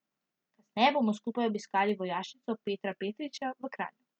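Speech, interrupted by periodic USB or driver dropouts between 0.87 and 3.95 s, spaced about every 1.02 s. Each dropout skips a tiny slice of audio, around a tenth of a millisecond, with no fill. The result is a regular tick, roughly four in all, from the bus or driver stalling on a fixed schedule.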